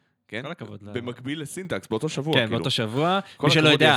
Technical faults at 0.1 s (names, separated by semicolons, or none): none